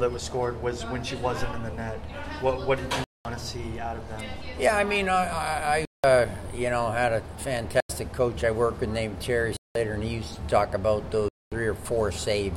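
A block of digital silence hits at 3.04, 5.85, 7.80, 9.57 and 11.28 s. Each is a 90 to 230 ms hole, three of them with lengths that fit 4096- and 8192-sample buffers left unfilled. It cuts hard to silence, not a fade or a low-level dropout.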